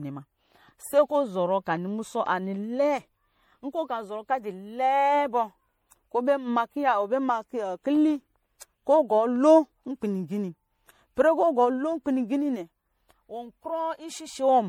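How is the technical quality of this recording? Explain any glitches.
The technical quality is compromised by one fault that runs through the whole speech recording: generation loss. The speech sounds swirly and hollow, with a smeared, watery texture and softened consonant attacks, more degraded than a single lossy encode would leave it. This is likely the result of repeated MP3 encoding, about three passes, at a rate that fits 64 kbit/s. Each pass re-quantises on a shifted frame grid, so the artefacts compound. A spectrogram would show flickering holes and blotchy patches between harmonics, with nothing above 20.8 kHz. On the waveform, sharp onsets look rounded and pre-echo smears in ahead of them.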